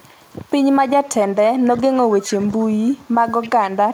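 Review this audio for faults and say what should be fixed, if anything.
Echo leak occurs in five bursts: 0.01–0.08 s, 1.21–1.40 s, 2.21–2.35 s, 2.79–3.09 s and 3.41–3.68 s. Each is a delayed copy of the speech trailing by 266 ms. It is barely audible at the start and about 20 dB below the speech at its loudest, in the third and fifth bursts. The fixed lag fits loudspeaker output reaching a microphone, with an echo canceller that likely did not fully remove it. Improving echo cancellation on that end, or using a headset there, would prevent it.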